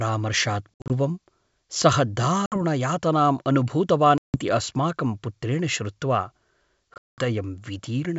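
Speech carried over G.722 wideband coding suffers packet loss on an ADPCM call at 0.75, 2.46, 4.18 (just before "अस्माकं पुत्रेण") and 6.94 s. Silence replaces 60 to 220 ms of lost audio, leaving hard-edged holes. The decoder's predictor and step size then fall out of step with the sender's, so speech resumes with brief, slight distortion.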